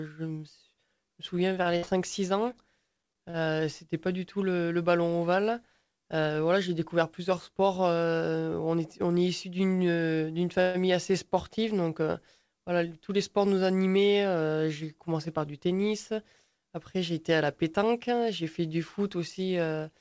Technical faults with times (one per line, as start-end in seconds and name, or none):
1.40-1.90 repeated packet loss (robotic sound)
2.53-3.37 repeated stalls (stutter)
8.47-8.81 jitter buffer speed-up
10.61-10.77 call audio freeze